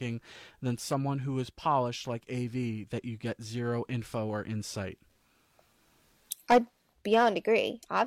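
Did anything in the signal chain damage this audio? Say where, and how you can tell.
No, nothing in the signal chain damaged this audio.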